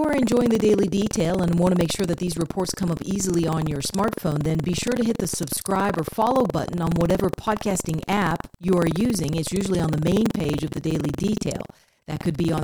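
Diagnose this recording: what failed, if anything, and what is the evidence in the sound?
Buffer tearing at the driver buffer: a 21.5 Hz rattle runs through the speech, fitting a 2048-sample buffer overwritten mid-read, visible as evenly spaced vertical seams.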